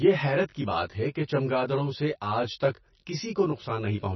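A speech recording with two faults running through its whole length. The first is channel delay (comb filtering): one channel arrives about 20 ms after the other, and summing them to mono cancels shared content at evenly spaced frequencies beginning around 30 Hz, so the sound takes on a rough or slightly doubled character. The second is heavy coding damage, likely from MP3 compression at a rate that fits roughly 26 kbps. Nothing is present above 5.9 kHz, and with so few bits the encoder drops weak spectral lines from frame to frame, which gives a watery, swirling texture and smears the onsets.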